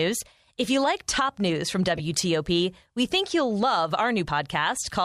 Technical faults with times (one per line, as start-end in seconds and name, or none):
1.96-2.00 corrupt frame decoded